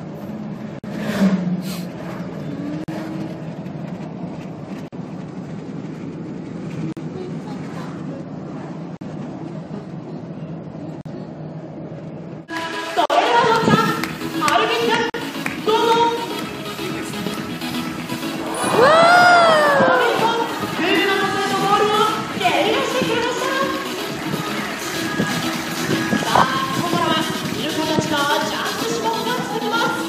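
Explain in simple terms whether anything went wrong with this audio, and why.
The sound keeps dropping out for a split second, a brief hole of silence with blurred edges, after which it resumes exactly where it left off. This happens at 0.79 s (about 51 ms), then every 2 s at 2.84, 4.88, 6.93, 8.97, 11.01, 13.06 and 15.10 s, each about 43 ms. This is a gap at a join of encoded pieces: the audio was compressed in 2-second chunks and stitched together without trimming the bits of silence each chunk gained at its edges.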